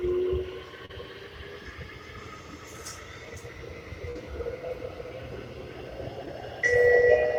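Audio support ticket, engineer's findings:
Short concealed packet loss at 0.85–0.91 s, 4.11–4.17 s and 6.25–6.28 s. Brief smears where the receiver's decoder extended prior sound over roughly 40, 40 and 20 ms gaps.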